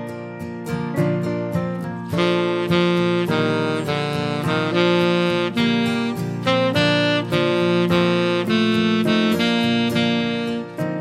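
No technical faults can be heard anywhere in the clip.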